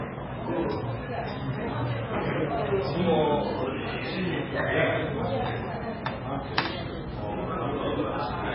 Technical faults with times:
0.00-8.55 MP3 compression

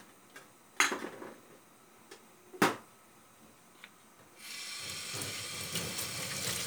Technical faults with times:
none

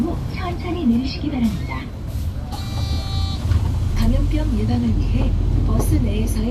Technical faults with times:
none

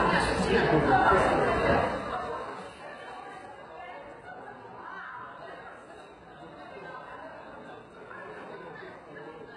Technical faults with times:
0.00-9.56 HE-AAC compression

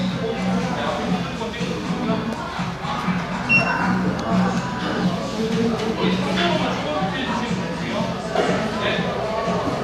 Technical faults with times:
none

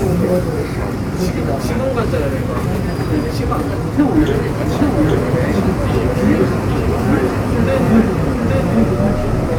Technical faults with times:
0.00-9.59 sample clock jitter
4.71-9.59 doubled audio track

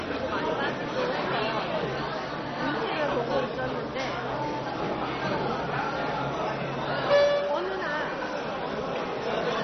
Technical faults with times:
0.00-9.64 MP2 compression

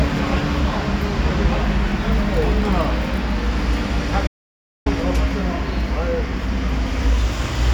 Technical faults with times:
4.27-4.86 audio dropout to silence

